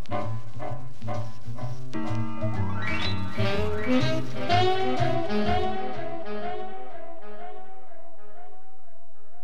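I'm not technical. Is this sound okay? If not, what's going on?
No. DC offset runs through the whole music clip: the waveform sits shifted off its centre line, which you can't hear directly but which wastes loudness room.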